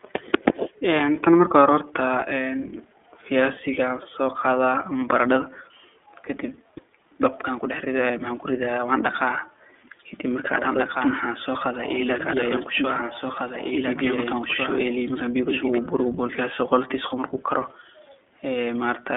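Throughout the clip the speech carries the sound of the iLBC codec, with plainly audible coding damage. The band runs from roughly 300 Hz to 3.5 kHz, and nothing reaches above 3.7 kHz, so sibilants are dull and the tone is boxy. Each 30 ms frame's excitation is coded on its own, which leaves a slightly rough, synthetic texture. This fits iLBC's 13.33 kbps mode.

From 10.54 s to 15.78 s a doubled audio track is audible. A second full-band copy of the speech runs about two seconds behind the original and a few dB quieter. It has no reverberant tail or room colouring, and it cuts in and out abruptly, ending just before "buri wuu". The likely cause is the same signal being captured again through a slower path or an edit that overlapped two copies out of step.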